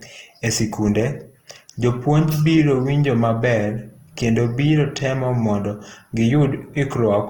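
A speech clip with plainly audible Opus compression from start to finish. The voice sounds grainy, rough and noisy in texture. The likely cause is Opus in its music mode at a low bitrate, around 16 kbps, with content still reaching about 20.3 kHz.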